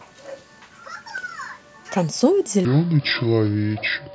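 From 2.65 s to the end of the clip, a section at the wrong speed plays back at 0.652 times its recorded rate, likely because that part was clocked at the wrong rate. The speech drops about seven semitones and drags, turning deep and sluggish.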